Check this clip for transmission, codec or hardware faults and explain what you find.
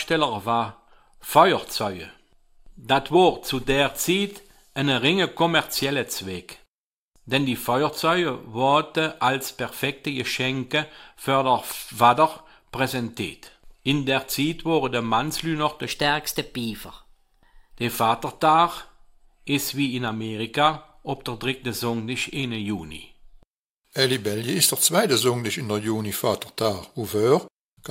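One fault turns up, a section at the wrong speed from 15.86 to 17.75 s. For just under two seconds the audio runs about 1.12 times too fast, so pitch climbs by roughly two semitones and everything sounds hurried, then snaps back to normal. Since speed and pitch shift together, the likely cause is that stretch being played or resampled against the wrong clock rather than any pitch processing.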